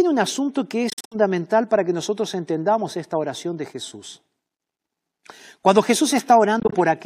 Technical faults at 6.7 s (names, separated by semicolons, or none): Bluetooth dropout